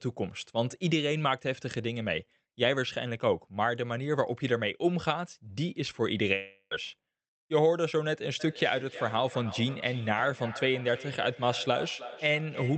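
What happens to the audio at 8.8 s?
At 8.8 s the sound is caught in a feedback echo between two devices, running from 8.40 s to 12.77 s. A second device replays the call, and that microphone sends it back. Each phrase returns about every third of a second, with the loudest repeat about 14 dB below the speech.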